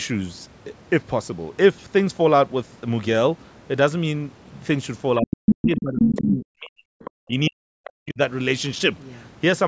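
From 5.19 to 6.95 s the talker's speech dips and breaks up, falling by as much as about 40 dB for roughly a second and a half in total. From 7.27 to 8.19 s it does so again for about 0.7 s. This is speech suppressed in double talk: with both sides speaking at once, the echo canceller likely could not tell its own talker from loudspeaker echo and attenuated both.

A second voice leaks through at 5.21 to 5.82 s and 5.99 to 6.21 s, at roughly the same level as the talker. Fainter scraps follow at 7.02 to 7.11 s, about 15 dB down, and at 7.84 to 7.9 s, about 20 dB down. This is the other side's voice leaking through, likely residual echo the canceller failed to remove from the microphone signal.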